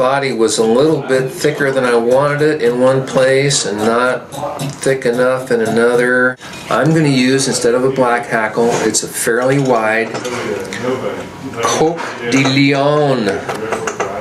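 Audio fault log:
Throughout: gain pumping. Each loud sound makes the overall level duck, and in the quieter gaps the level swells back up, a swing of around 15 dB. Loud and soft passages sit unnaturally close together, giving a squashed, breathing quality. The likely cause is input gain set far too high for the microphone, with a fast limiter or compressor repeatedly clamping the level on peaks and then releasing it between them.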